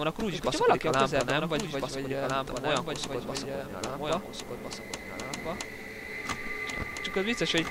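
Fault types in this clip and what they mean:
Doubled audio track: a full-band copy trails about one and a half seconds behind, about 5 dB quieter, likely a second capture path; spectrograms show every event repeated, undecayed.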